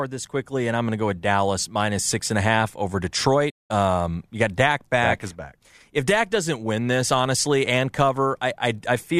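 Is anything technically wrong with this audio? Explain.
Yes. From 3.50 to 3.71 s there is a digital broadcast dropout. The receiver muted after losing the signal or receiving corrupted frames, so the speech fades out within 8 ms and about 190 ms is lost.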